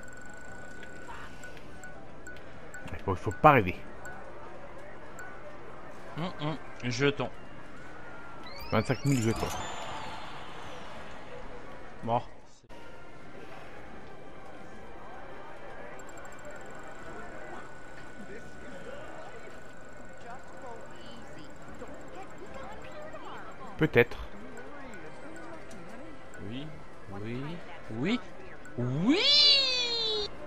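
No audible technical faults anywhere in the clip.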